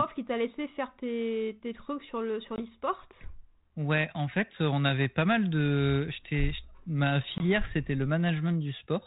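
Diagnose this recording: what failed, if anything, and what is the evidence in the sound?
Packet loss on an ADPCM call, at 2.56 s and 7.38 s: a network fault. Each time, a hard-edged 20 ms hole, roughly one packet, cuts the speech. The 32 kbit/s G.726 decoder's adaptive predictor and step size then drift from the sender's, so speech returns at the wrong level or with a click and distortion, settling within tens of milliseconds.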